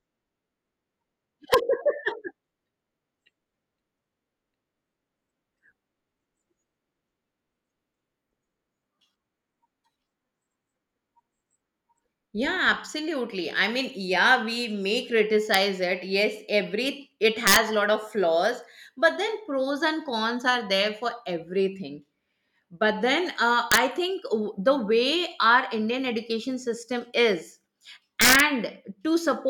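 Speech marred by sharp, violent cracks on loud moments at 1.54 s, 15.54 s, 17.47–17.56 s, 23.72–23.77 s and 28.21–28.40 s. This is integer overflow: peaks pushed about 0 to 4 dB past full scale wrapped to the opposite sign instead of being limited.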